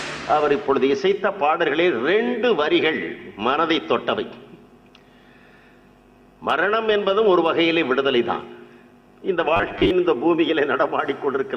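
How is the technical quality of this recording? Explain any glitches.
There's one glitch worth flagging: robotic sound from repeated short buffers between 9.57 and 9.91 s. For about a third of a second the audio goes rigid and metallic, with a fixed buzz near 100 Hz. That's likely a buffer underrun where the player kept looping a 10 ms chunk, so roughly half of that stretch is repeats rather than fresh audio.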